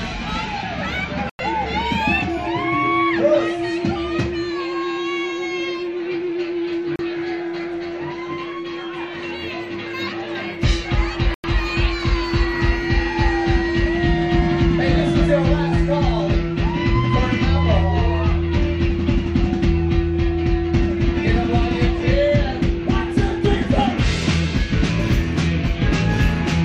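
A digital broadcast dropout occurs three times. The receiver lost valid frames and muted until clean data resumed, so the audio cuts to silence from 1.30 to 1.40 s, from 6.96 to 7.00 s, and from 11.34 to 11.44 s. The two longer holes of about 96 ms fit three 32 ms frames discarded together. The 32 ms gap fits a single frame. Whatever was transmitted during each hole is lost, and the sound resumes later in the programme.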